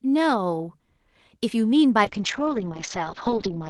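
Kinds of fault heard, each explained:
Call bitrate drop: from 2.05 s the encoder gets far fewer bits, fitting a fall from 32 to 10 kbps. The sound turns coarse and watery as its top narrows from 12 kHz to 6 kHz. Unlike filtering, roughness accompanies the muffling, with no dropouts.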